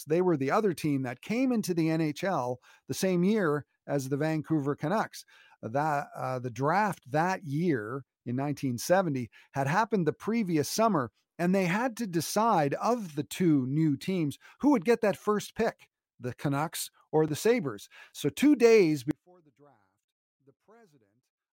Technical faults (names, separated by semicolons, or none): audio dropout to a faint residue